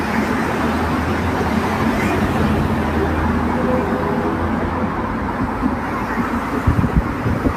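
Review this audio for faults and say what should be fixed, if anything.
Nothing to fix: no faults are audible anywhere in the audio.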